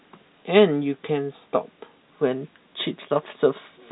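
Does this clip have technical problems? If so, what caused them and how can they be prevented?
No, this recording shows no technical problems.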